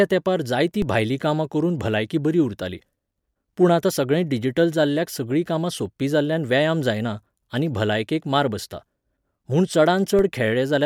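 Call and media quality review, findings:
DC steps at 0.82 s, between "तेंपार जायतीं" and "भायलीं कामां करून भलायकी", and at 10.19 s. Low thump each time. Zero-line offset of about -17 dBFS, bled off by a 20 Hz high-pass. Points to converter recalibration.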